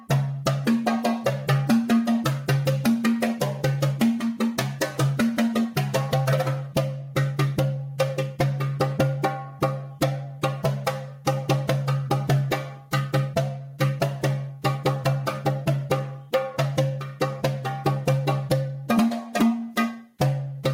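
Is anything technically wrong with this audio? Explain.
Yes. Throughout, there is gain pumping: the gain swings by roughly 10 dB, leaving everything squashed together. The likely cause is input gain set far too high, with a fast limiter clamping each peak.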